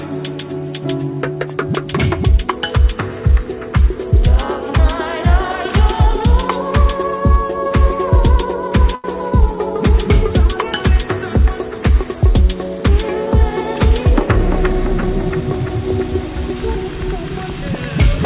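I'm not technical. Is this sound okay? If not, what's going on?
No. There are two separate problems.

Short stall from a late packet, at 8.95 s: The sound briefly hangs for about 88 milliseconds, as if stuck on one spot, before carrying on. On a call, audio travels in small chunks, and one chunk turned up late. With nothing new to play, the receiving end stretched the last bit of sound until that chunk arrived, then resumed exactly where it left off. Nothing is lost, but the moment is drawn out and may buzz or dip slightly.

Jitter buffer speed-up, from 12.95 s to 15.82 s: For almost three seconds the sound runs about 3 percent fast, while the pitch stays the same. Earlier delays had left the receiver holding more audio in reserve than it wants. To catch up, it repeatedly cut out tiny slivers, removing roughly a tenth of a second in total. The sound has the muffled, phone-like quality of an ordinary call line, with nothing above 4 kHz.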